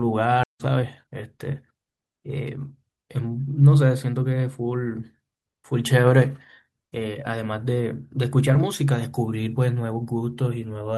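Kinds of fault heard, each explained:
Skip ahead: at about 0.43 s the speech jumps forward, with roughly 0.7 s of audio dropped while later audio was already queued, and the two sides of the cut are butted together with no fill, cutting the buffered delay by roughly 0.7 s.
Jitter buffer speed-up: from 0.54 to 2.18 s the receiver trims short pitch-period segments repeatedly to shrink an overfull buffer, so the speech plays at 110 % speed with pitch unchanged, removing roughly 150 ms and sounding hurried.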